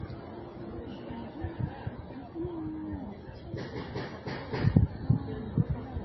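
Throughout, nothing sounds above about 5.8 kHz and low-bitrate smearing persists: likely low-bitrate audio saved at a high bitrate, a 24 kbit/s-quality MP3 re-encoded far higher.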